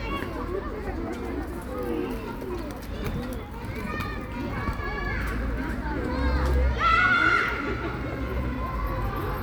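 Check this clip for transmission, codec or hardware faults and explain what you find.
No faults turn up anywhere in the clip.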